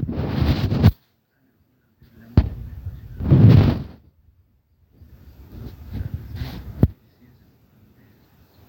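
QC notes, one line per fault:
Nothing to flag here; the speech comes through without any technical trouble worth noting.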